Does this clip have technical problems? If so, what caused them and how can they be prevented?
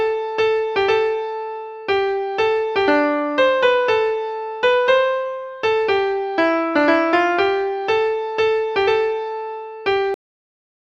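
Yes. Compressed frames skipped at 8.87 s: one compressed frame, about 20 ms of audio, never reaches the output, either because it is missing from the file or because the decoder rejected it as damaged. Playback jumps forward by that amount, leaving a short discontinuity at the join. To prevent it, check stream integrity after encoding and transfer, and use transport or container error protection so damaged frames can be resent or recovered.

Cut-off end at 10.14 s: the sound stops mid-event and drops straight to digital silence with no natural decay, continuing silent until the clip ends. The final buffers were never written or played, so whatever was sounding is simply truncated. To prevent it, make sure the recording or export process flushes and writes all pending buffers before closing the file.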